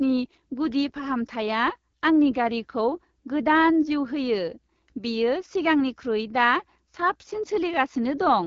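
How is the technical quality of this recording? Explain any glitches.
Technical quality is poor throughout because of AMR wideband (HD Voice) codec damage. From start to finish, the speech was coded by a pulse-driven vocal tract model at one of its lowest rates, fitting about 8.85 kbit/s. It sounds rough and raspy, with nothing above 7.2 kHz.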